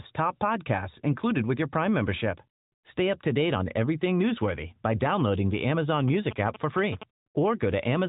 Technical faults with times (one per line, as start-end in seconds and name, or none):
6.08-7.03 GSM signalling bursts